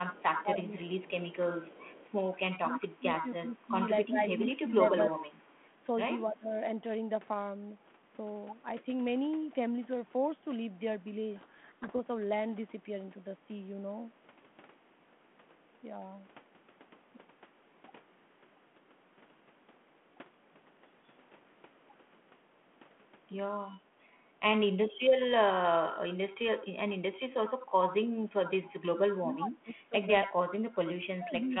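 Speech suppressed in double talk, 0.05 to 6.53 s: the talker's level dips by up to about 25 dB, for roughly three seconds in total, likely because the echo canceller turned everything down while both sides spoke at once.

Echo leak, 0.37 to 2.37 s and 4.29 to 5.54 s: a copy of the voice returns 286 ms late, faint at about 25 dB below the speech at first, then loud at about 5 dB below. The likely cause is a loudspeaker end whose canceller let its microphone pickup through.

Codec payload misread, 11.36 to 11.91 s: the speech drowns in harsh distortion because the decoder read the G.726 code words with their bits in the wrong order.

Background gated by the echo canceller, 23.98 to 24.09 s: the room sound drops by about 8 dB for roughly 70 ms while the canceller clamps the microphone during loudspeaker playback.

Speech suppressed in double talk, 26.17 to 27.29 s and 29.20 to 31.60 s: the voice briefly dips by about 15 dB, then later by up to about 25 dB for about 1.5 s, likely from the same overlap ducking.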